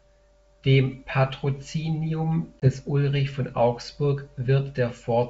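A speech clip in which the sound drops into a hard-edged silent gap at 2.60 s and comes back by 2.67 s slightly distorted, with roughness before settling. This is packet loss on an ADPCM call: about 20 ms of audio, roughly a single packet, went missing and was filled with silence, so the decoder's adaptive predictor and step size drifted from the sender's and needed a few tens of milliseconds to realign. The wideband sound, clear up to about 7 kHz, fits G.722 wideband telephone coding at 64 kbit/s.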